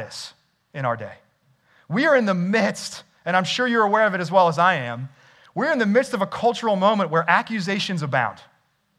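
No faults detected anywhere in the speech recording.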